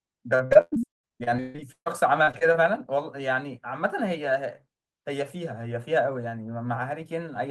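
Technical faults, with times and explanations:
0.35–2.56 s, repeated packet loss (robotic sound): the speech breaks up into a rapid series of short dropouts, the longest about 141 ms. Each hole is filled by extending the preceding sound, so roughly 37% of this stretch, about 0.83 s in total, is synthetic continuation rather than real signal. Because the patches recur before normal audio re-establishes itself, the result is choppy, with pieces of the speech missing.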